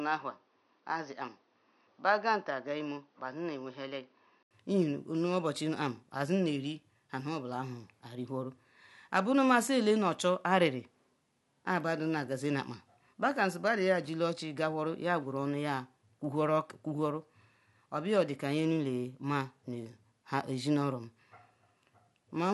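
From 0 to 4.51 s the speech is dull, with nothing above 6.3 kHz, and somewhat quieter. An 80 ms gap follows. The input likely switched to a poorer device.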